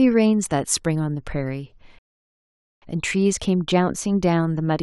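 From 1.50 s to 4.27 s the sound shows channel delay (comb filtering). One channel runs late by about a single sample, roughly 0.02 ms, and when the two channels are summed to mono the shared content cancels at evenly spaced frequencies. With so short an offset, the first notch falls near 20 kHz, at the top of the audible band. The result is a dulling and loss of air in the highest frequencies rather than an obvious hollow or phasey colour.

Within that span, a rebuffering stall runs from 1.99 s to 2.82 s. Playback ran out of buffered audio and halted until more data arrived. The sound drops to silence for 0.83 s, then picks up exactly where it stopped, with nothing skipped. The pause adds time to the clip instead of removing content, and the restart lands mid-stream without a jump.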